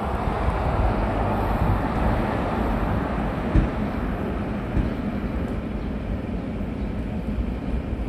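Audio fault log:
1.96 to 5.60 s, doubled audio track: a second full-band copy of the sound runs about a second behind the original, roughly 5 dB quieter. It has no decay or room colour. It cuts in and out abruptly. A slower second capture path is the likely cause.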